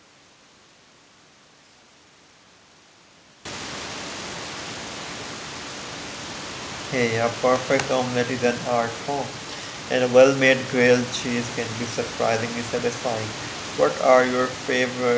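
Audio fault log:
Nothing stood out on listening to this speech clip.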